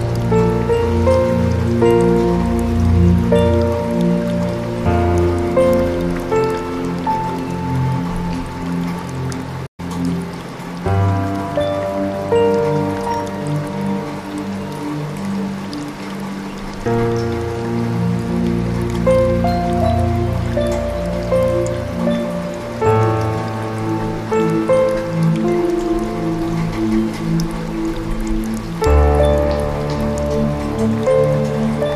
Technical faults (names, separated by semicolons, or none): playback stall